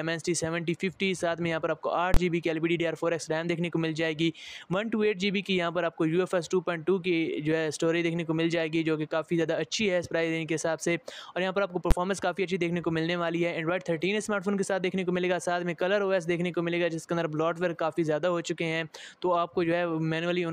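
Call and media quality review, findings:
Invalid numbers at full scale: loud bangs at 2.14 s (about 23 ms) and 11.91 s. The DSP stage is producing infinite or invalid values that clip to full-scale output, which fits one 1024-sample block and one 512-sample block.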